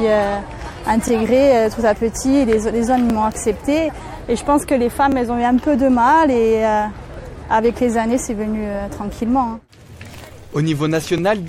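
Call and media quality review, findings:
Overlapping chunks: brief stutter-clicks, each about 20 ms, starting at 1.08, 3.1, 5.12, 7.14 and 11.18 s. Probable component: chunked processing or transport with a 2-second block size, where each block begins about 20 ms before the previous one ends, so that slice plays twice at every join. Differs from packet loss or dropouts: nothing is missing, a fragment repeats instead, and the spacing is regular, about every 2 s, not random.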